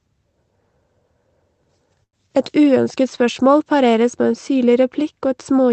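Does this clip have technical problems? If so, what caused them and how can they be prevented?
Yes. From 2.03 to 2.16 s there is a short stall from a late packet: a packet arrived after its playout time, the jitter buffer ran dry, and the receiver stretched the preceding sound for about 97 ms before resuming exactly where it left off. That differs from a packet-loss dropout: no sound is skipped or replaced, a sound is simply held too long, and everything after it plays about 97 ms later. Giving the jitter buffer more headroom, or letting it adapt sooner to rising network jitter, would prevent this.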